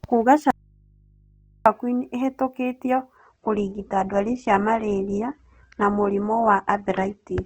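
At 0.51 s the speech drops out abruptly to a faint residue, leaving only mains hum about 35 dB down for 1.15 s, likely a lost feed on a still-live input. From 3.17 s to the end, the adaptive stream is at a lower bitrate: the treble cuts off above 8.2 kHz and codec artefacts suddenly rise, consistent with a very low Opus rate.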